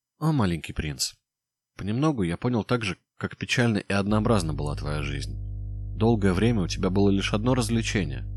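At 4.11 s a mains hum enters and continues to the end of the clip. A steady low tone at 50 Hz, with some low harmonics above it, sits under the speech at roughly 10 dB below it. The power line is coupling into the signal path, most likely through a ground loop or a transformer close to the recording chain.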